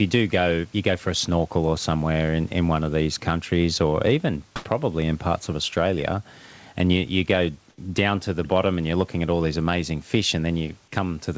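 Speech recording with two brief pauses at 4.56 s and 7.70 s, each lasting 80 ms, where the room background gives way to a flat, featureless hiss, likely comfort noise in place of the background after discontinuous transmission. The level shifts by about 24 dB at the first and about 2 dB at the second.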